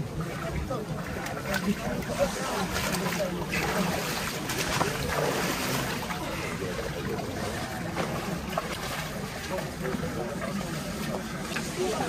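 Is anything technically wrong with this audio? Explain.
Yes. Damaged data in a compressed stream shows up twice, at 8.71 to 8.76 s and again at 11.51 to 11.55 s, each lasting about 44 ms. At both points part of the encoded stream is corrupt, so the decoder cannot interpret those frames correctly, loses frame sync and has to hunt for the next valid header before normal decoding resumes. Each event is heard as a brief chirp or blip cutting into the sound.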